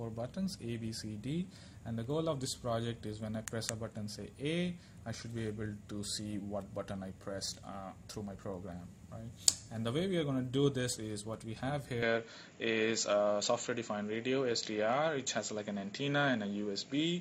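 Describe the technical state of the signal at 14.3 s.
An input switched to a poorer device is in effect at 14.3 s, within a span running from 12.03 s to the end. The recording likely changed to a narrower-band microphone: nothing sounds above 7.6 kHz, the level shifts by around 5 dB, and a faint new noise floor appears, with no gap at the switch.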